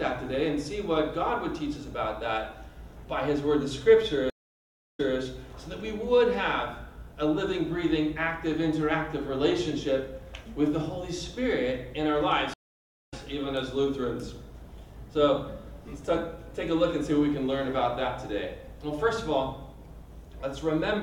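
At 4.30 to 5.17 s a stream reconnect drops the audio for 636 ms; the restarted decoder resumes 235 ms earlier, repeating material. A second reconnect at 12.54 to 13.14 s gives 546 ms of silence and resumes about 0.3 s later, skipping material.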